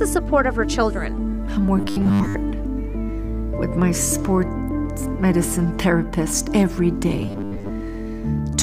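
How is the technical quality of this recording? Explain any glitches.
The recording has two glitches of the same kind. From 1.79 to 2.35 s and again from 7.20 to 7.70 s there is robotic sound from repeated short buffers, a rigid metallic buzz at 100 Hz that loosely tracks the underlying sound. The likely cause is audio arriving too slowly, so playback loops the last 10 ms segment and skips most of the real signal. A waveform would show identical 10 ms cycles, and a spectrogram would show evenly spaced horizontal harmonics at multiples of 100 Hz.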